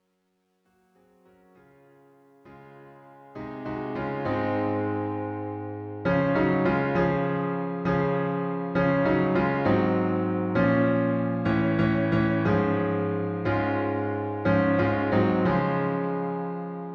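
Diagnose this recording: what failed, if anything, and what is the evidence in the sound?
Truncation distortion on the fade-in, 0.00 to 4.67 s, roughest 0.00 to 2.41 s: the undithered sample-format or gain stage keeps about 11 bits, so quiet levels turn into gritty steps.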